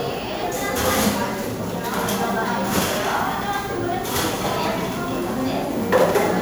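Generation loss runs through the whole clip: it sounds swirly and hollow, with smeared, softened attacks, more than a single MP3 pass would leave. It's likely the result of re-encoding about four times, each pass requantising on a shifted frame grid, at what sounds like 128 kbit/s.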